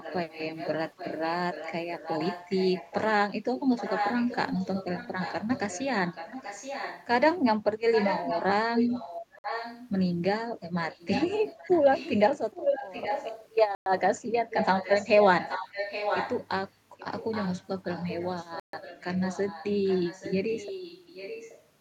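From the start to 3.09 s, then 3.55 to 7.07, 7.92 to 9.89, 10.91 to 13.49, 14.50 to 16.47 and 16.98 to 21.61 s, an echo leak trails the speech by about 0.83 s. It sits about 15 dB below the direct speech in the first and last stretches, about 10 dB below in the second and fourth, and only about 5 dB below in the third and fifth. The likely cause is a far-end loudspeaker whose echo canceller let part of its microphone pickup back into the call. On a spectrogram, the speech's harmonic patterns reappear fainter, shifted 0.83 s to the right.

Bluetooth stalls cut the audio to silence at 9.39 to 9.44 s for 55 ms, at 13.75 to 13.86 s for 112 ms, and at 18.60 to 18.73 s for 135 ms. These are likely the headphone buffer running dry while delayed wireless packets were resent. Each stall sounds like a sudden hole in the sound before it resumes. The waveform shows a flat line with abrupt edges, and the spectrogram shows a clean vertical blank band.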